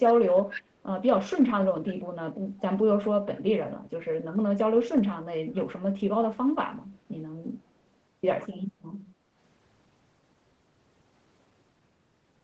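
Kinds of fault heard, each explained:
Echo leak: the far side's speech was coming out of a loudspeaker and the echo canceller didn't remove all of what that microphone picked up, so part of it was sent back down the line. Between 0.49 and 0.63 s a faint delayed copy of the speech can be heard. It trails the original by about 177 ms and sits well below it, roughly 15 dB down. A loudspeaker echo slipping past the canceller is the likely cause.
Background gated by the echo canceller: while the loudspeaker was playing, the echo canceller turned the microphone down hard to keep echo out, and the room sound went down with it. From 9.14 to 9.35 s the background noise dips by about 7 dB for roughly a fifth of a second and comes back once the canceller lets go. The result is a short, audible hole in the ambience.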